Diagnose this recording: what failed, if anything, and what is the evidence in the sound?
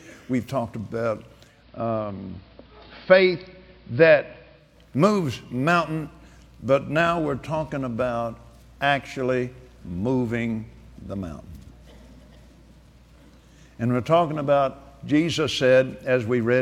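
Digital radio blending to analogue at the receiver, 1.41 to 4.79 s: the tuner lost the digital signal and cross-faded over 263 ms to AM, bringing faint hiss and a level about 1 dB lower.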